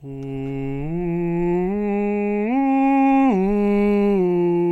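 A short piece of music, and nothing in it trips up the ear; there's no technical fault to point to anywhere.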